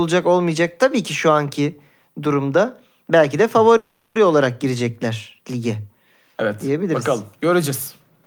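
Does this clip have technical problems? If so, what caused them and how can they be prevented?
Yes. At 3.77 to 4.17 s there is a call audio freeze. The last sound is stretched into a fading buzz lasting roughly 380 ms, including about 110 ms of near silence, and then the speech resumes exactly where it stopped. It was likely caused by packets arriving late and emptying the receiver's jitter buffer. Unlike packet loss, nothing is cut out: the speech simply runs about 0.38 s later afterwards. A larger adaptive jitter buffer and a more stable network path with less congestion would prevent it.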